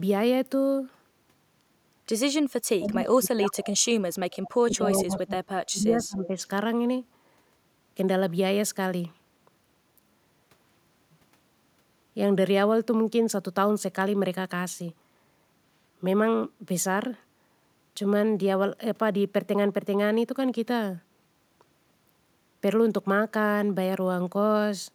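Speech suppressed in double talk, 2.78 to 3.82 s: the speech sinks by roughly 35 dB for about a second. An echo canceller likely could not separate its own talker from the overlapping loudspeaker echo and turned everything down.

Echo leak, 4.32 to 4.5 s: a faint copy of the speech, about 20 dB quieter and trailing by 149 ms, comes through. This is likely loudspeaker sound that the far end's canceller failed to remove before sending it back.

Speech suppressed in double talk returns at 4.62 to 5.36 s and 5.69 to 6.39 s. Each time the speech dips by around 25 dB for about 0.7 s, likely the same suppression clamping down while both sides talk.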